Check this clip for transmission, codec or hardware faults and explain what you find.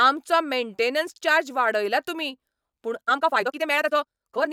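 One fault stands out: a time-stretched section from 3.03 s to the end at 4.52 s. The speech abruptly runs at about twice its pace while its pitch stays put, giving a rushed sound. It was likely squeezed by software to fit a length, with short pieces dropped to hold the pitch steady.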